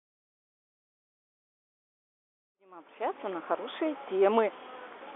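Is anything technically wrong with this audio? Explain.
No, nothing is technically wrong with this audio.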